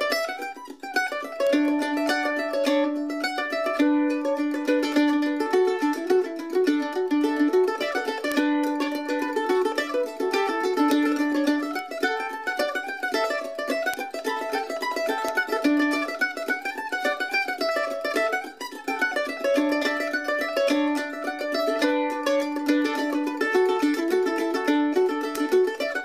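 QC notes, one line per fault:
1.47 to 25.36 s, bit error spikes: eight sharp broadband ticks at 1.47, 8.32, 10.91, 11.79, 12.6, 13.94, 15.29 and 25.36 s, peaking at about -15, -9 or -3 dBFS. Each is a flipped bit pushing one or two samples far off by a power of two, so the ticks bear no relation to the surrounding sound.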